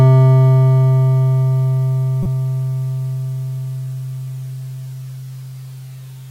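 At about 2.23 s the music gets hit by a corrupt frame decoded, a short burst lasting roughly 30 ms, up to 2.26 s, which points to a couple of compressed frames being damaged. Some of the bits in those frames got flipped, and the decoder played them anyway, so misread gains and codes spread energy into frequencies where it doesn't belong. You hear it as a quick chirpy blip of noise sitting on top of the music, peaking somewhere around -10 dBFS.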